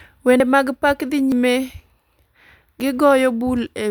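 A speech clip with three abrupt skips, each heard as the sound jumping forward. They fall at 0.4 s, just before "mag pak dhi", at 1.32 s, just after "mag pak dhi", and at 2.8 s. No silence fills the gaps. Roughly 70 ms, 100 ms and 40 ms of audio vanish. The likely cause is a dropped buffer (overrun), where samples were overwritten before capture collected them.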